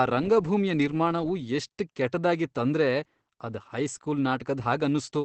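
From start to finish the speech carries Opus voice compression in its linear-prediction mode, with nothing above about 8 kHz, so it's muffled and a bit hoarse and robotic. The coarse excitation coding is plainly audible, which fits a bitrate around 12 kbps.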